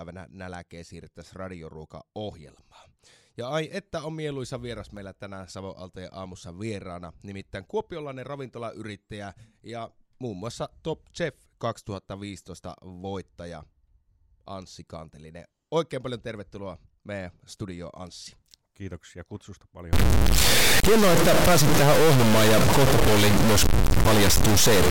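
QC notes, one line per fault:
19.93–24.91 s, stuck bit: from just before 20 s to the end the speech turns harsh and buzzy, and the gaps between phrases fill with a steady hiss-like noise at roughly a −15 dBFS step, far above a normal noise floor. This is likely a data bit held at one value, so about half the samples jump by that bit's weight and quiet passages flip with the sign of small values. The spectrogram shows a broadband haze across every frequency, including the pauses. On the waveform, samples are displaced into a stepped, offset band.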